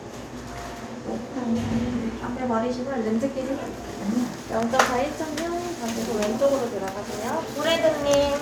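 No technical faults are audible.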